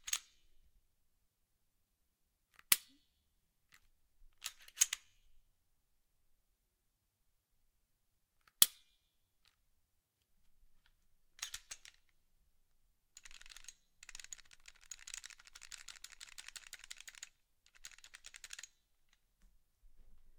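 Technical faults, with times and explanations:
No technical faults detected anywhere in the recording.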